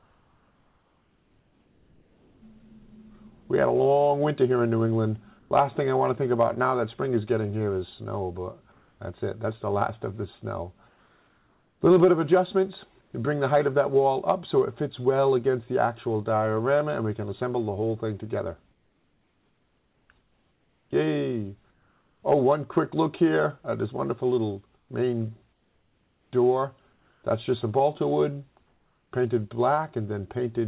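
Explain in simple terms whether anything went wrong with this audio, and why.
Comfort noise in place of the background appears in the quiet gaps at 0.00–2.42, 5.39–5.51, 8.72–8.99, 10.88–13.13, 18.71–22.22, 24.77–27.23 and 28.67–29.12 s. In those pauses the real room sound gives way to a flat, featureless hiss, slightly quieter or louder than before, until the sound resumes. The likely cause is that the sender stopped transmitting during silence and the receiver generated stand-in noise. The call path also cuts everything above 4 kHz.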